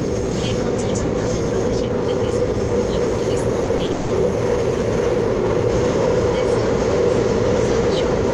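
From 3.64 s to 4.12 s the audio breaks up with repeated packet loss (robotic sound). Four holes open in quick succession, totalling about 260 ms, with the longest lasting 180 ms. Each is patched by stretching the preceding sound forward, so more than half the span is concealment. The result is choppy, with pieces missing. On a spectrogram the fills show as smeared, repeated bands, and the waveform has looped, self-similar blocks where detail should change.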